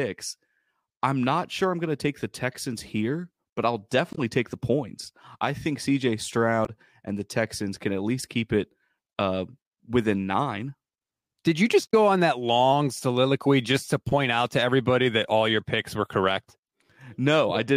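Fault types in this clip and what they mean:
Damaged data in a compressed stream: corrupted frames make the decoder lose sync, giving short blips in this speech near 4.13, 6.65 and 11.91 s.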